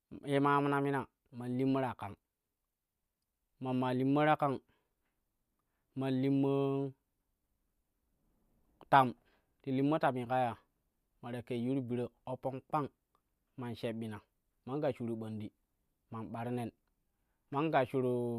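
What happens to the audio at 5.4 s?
Nothing goes wrong at 5.4 s; the speech runs on intact through that moment, with no dropout, click, distortion or other fault.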